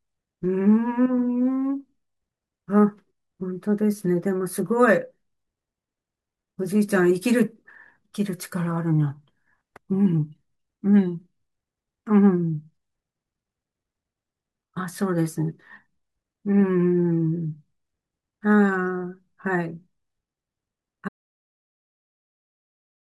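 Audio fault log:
21.09 s to end, audio dropout to silence: the speech stops abruptly at 21.09 s and the last 2.03 s of the clip are silent, with no room tone or noise floor left underneath. The input was most likely lost, whether through a disconnected device, a failed link or an accidental mute, while the recorder kept writing silence, so whatever was said during that stretch is missing and the clip ends in dead air.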